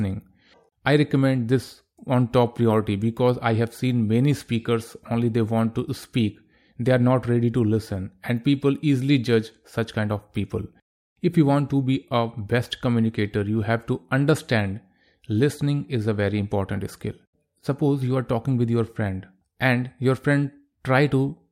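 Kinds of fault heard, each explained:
Nothing here calls for a fault line, as the speech carries no technical problems worth pointing out.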